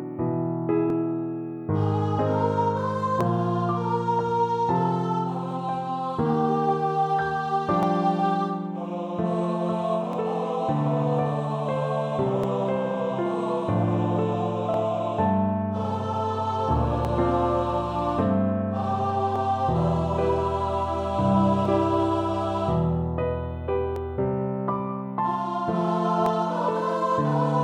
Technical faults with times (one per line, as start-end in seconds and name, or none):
0.90-26.26 clock drift buffer slips